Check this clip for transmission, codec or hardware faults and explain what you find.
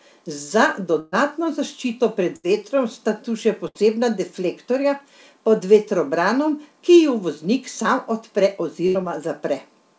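The clip has four bursts of packet loss, at 1.00 to 1.15 s before "zaščito pred vetrom sta", at 2.36 to 2.46 s between "zaščito pred" and "vetrom sta tu še", at 3.67 to 3.78 s before "deflektorja pod vetrobranom ki", and at 8.87 to 8.98 s. Each time about 80 ms of speech is lost (120 ms in the first), and the receiver stretches the last sound into a fading buzz or hiss before speech resumes further on. Unlike a plain dropout, these gaps are filled rather than silent, and the speech skips ahead. The audio was carried over a call path with nothing above 8 kHz, which points to G.722 at 64 kbps.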